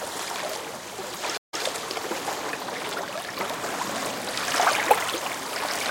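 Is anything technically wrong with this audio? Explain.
Yes. A stream reconnect occurs between 1.37 and 1.63 s. The connection dropped, so the player output about 152 ms of silence, then re-established the link and started a new decoder partway through the stream. The server resent a short burst of buffered data, so the audio resumes about 104 ms earlier than where it cut off. The listener hears a gap followed by a brief repeat of material already played.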